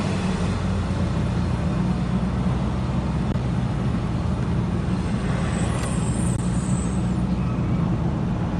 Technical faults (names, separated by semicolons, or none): phantom power thump